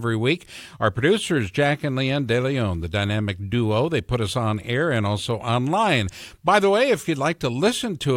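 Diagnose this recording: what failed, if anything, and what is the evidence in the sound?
Nothing in this speech recording points to a failure at any stage of the chain. There is no event in the sound that calls for a diagnosis.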